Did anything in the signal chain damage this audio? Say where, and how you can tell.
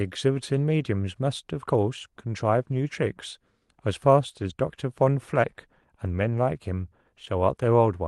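Yes. Rougher, noisier stretches at 2.61–2.71 s, 4.29–4.51 s, 6.05–6.23 s and 7.27 s, with no gap, point to network loss: lost packets rebuilt from error correction using low-bitrate copies.

A brief smear at 7.25–7.29 s is short concealed packet loss. About 20 ms arrived too late, so the decoder extended the preceding sound before blending back.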